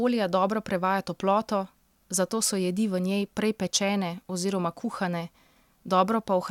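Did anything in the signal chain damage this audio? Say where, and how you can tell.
No, nothing along the way seems to have hurt this speech; it all comes through as it should, with no stage leaving a mark you can hear.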